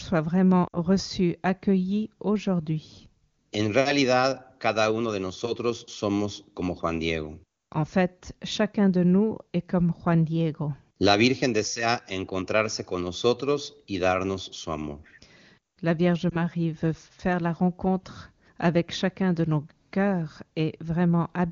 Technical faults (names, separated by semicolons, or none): lost AMR speech frames